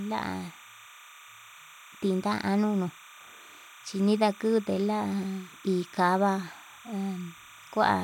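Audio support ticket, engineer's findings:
Timecode bleed, present throughout the speech. Steady chirping warble behind the voice, roughly 25 dB below it, alternating between tones near 1 kHz and 2 kHz. Repetition rhythm fits 30 fps linear timecode. Probable component: adjacent LTC track or cable. Square-wave code coupling into the audio path through crosstalk.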